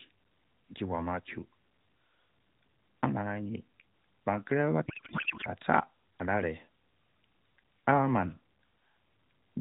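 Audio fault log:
4.86–5.48 s, codec payload misread: the receiver unpacks the AMR-NB frames with the wrong bit layout, which points to octet-aligned payloads being read as bandwidth-efficient. Every parameter field lands in the wrong place, so the decoder builds sound from nonsense values. For about 0.6 s the speech is replaced by garbled noise and warble that barely follows it, still capped below 4 kHz like the surrounding narrowband audio.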